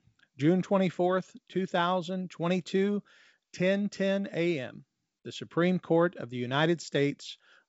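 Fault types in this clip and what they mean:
No fault types appear in this clip; the speech comes through wideband G.722 telephone coding at 64 kbit/s, with nothing above about 7 kHz.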